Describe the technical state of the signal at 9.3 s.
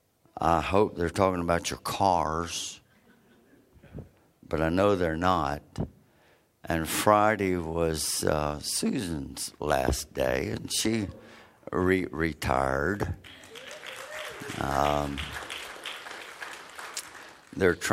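At 9.3 s the signal is intact, with no audible technical fault at that moment.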